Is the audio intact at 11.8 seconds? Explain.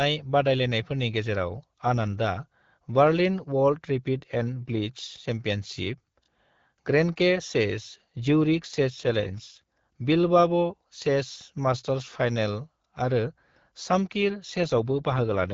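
Yes, the audio is intact at 11.8 seconds, with no fault at that moment.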